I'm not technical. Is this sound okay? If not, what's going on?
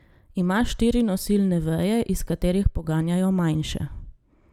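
No, not quite. Through the speech you'll hear sharp ticks, roughly one every 0.7 seconds, from about 0.18 s to 4.30 s, so around seven in all, some louder than others. That's word clock ticks: the recording passed between two pieces of gear whose internal clocks ran at very slightly different speeds. Each time they drifted out of step, a single sample got dropped or doubled, leaving a click.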